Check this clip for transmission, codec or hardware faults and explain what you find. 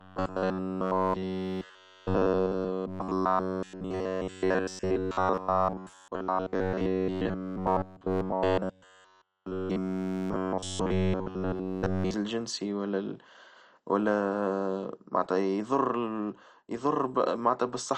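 Two faults are audible: a mechanical buzz over most of the speech, and codec damage over the whole clip.

From 0.01 s to 12.14 s the speech has the robotic sound of repeated short buffers. It is reduced to a rigid metallic drone pitched at 93.8 Hz. That points to a stretch of about 10.7 ms being looped, likely because fresh audio arrived too rarely and the player kept replaying what it already had. Essentially the whole stretch is repetition. The waveform shows an identical short cycle tiling the section, and a spectrogram shows evenly spaced horizontal harmonic lines at multiples of 93.8 Hz instead of moving speech formants.

Throughout, the audio carries the marks of MP2 compression: a dull, gurgling, grainy texture with plainly audible damage. The likely cause is MPEG Layer II running at a low bitrate, consistent with about 48 kbps, where too few bits force the upper sub-bands off entirely and leave the remaining ones coarsely quantised. 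A spectrogram shows upper bands switched off and blocky patches flickering on and off in the upper bands.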